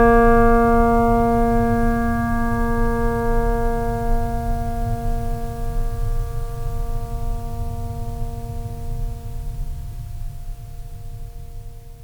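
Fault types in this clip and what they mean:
No fault types are present in this music clip.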